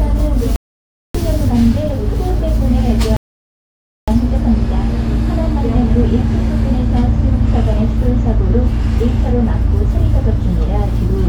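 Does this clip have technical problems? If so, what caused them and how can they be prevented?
Yes. The player twice ran out of downloaded audio and halted, producing a rebuffering stall at 0.56 to 1.15 s and another at 3.17 to 4.08 s. Each time the sound drops to silence, then picks up exactly where it stopped, losing nothing but adding about 0.59 s and 0.91 s. A larger startup buffer or adaptive bitrate switching helps prevent these stalls.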